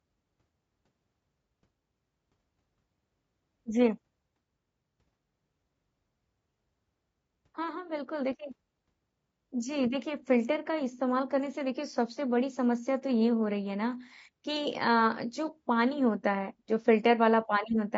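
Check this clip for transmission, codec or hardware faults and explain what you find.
There's one codec fault, and it runs the whole way through. The speech sounds rough and grainy, with noise filling between harmonics, likely from low-delay AAC compression; short frames starve pitch detail, which fits a low bitrate around 32 kbps.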